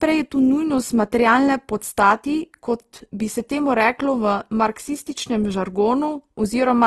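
Throughout the speech, the likely cause is low-bitrate audio saved at a high bitrate. An earlier heavy compression, consistent with Opus near 16 kbit/s, was re-encoded as a spacious MP3 that cannot restore what was discarded. Nothing sounds above 12.1 kHz, and first-generation artefacts persist.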